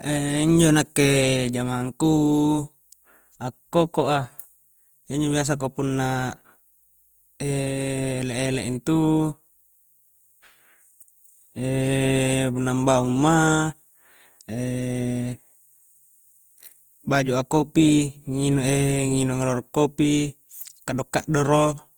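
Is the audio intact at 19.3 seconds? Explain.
No. Opus compression likely runs throughout, including 19.3 s: band energies are kept but detail is noise-filled, which fits about 24 kbps, making the speech grainy and rough.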